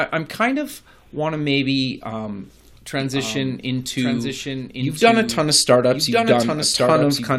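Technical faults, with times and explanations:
3.00 s to the end, doubled audio track: from 3.00 s a second, full-band copy of the speech enters abruptly and runs about a second behind the original, roughly 5 dB quieter, until the clip ends. It carries no decay or added room colour, so it reads as a clean, out-of-step duplicate rather than an echo. The likely cause is the same signal being captured again through a slower path and mixed back in, or an edit stacking two offset copies.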